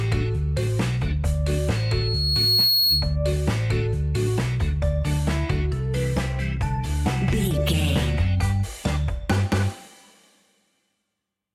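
A microphone picked up its own loudspeaker, and near 4.3 kHz the loop gain went above one, causing loudspeaker feedback squeal from 1.75 to 3.16 s. A pure tone swells over roughly a second into a squeal that ends up around 5 dB louder than the sound.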